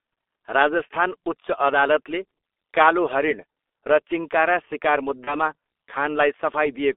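From the start the speech carries the sound of the G.723.1 codec at 6.3 kbit/s. The band runs only from 300 Hz to 3.6 kHz, and the coarse, slowly updated voice model leaves it heavily muffled and hoarse with smeared consonants. A plain telephone filter would narrow the band but keep consonants crisp.

From 5.25 to 5.35 s there is VoIP packet loss concealed by the speech codec. The gap fits a single lost 30 ms frame. Instead of a silent dropout, the decoder extends the previous sound into a fading buzzy tone or coloured noise, and the voice stays weak and distorted afterwards while its state recovers.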